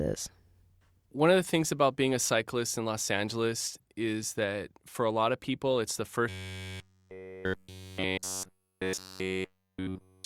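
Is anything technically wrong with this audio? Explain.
Yes. From 6.29 s, right after "of people it's the", to the end, the speech has robotic sound from repeated short buffers, likely because new audio arrives too slowly. Essentially all of that section is a short fragment replayed, imposing a rigid metallic buzz at 93.8 Hz, one repeat about every 10.7 ms.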